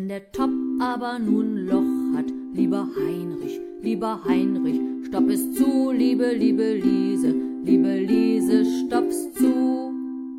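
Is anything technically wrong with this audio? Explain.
No, nothing technically wrong can be heard here.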